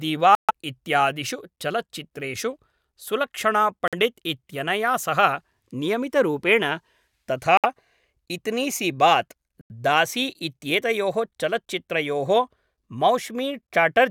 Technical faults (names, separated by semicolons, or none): Bluetooth stall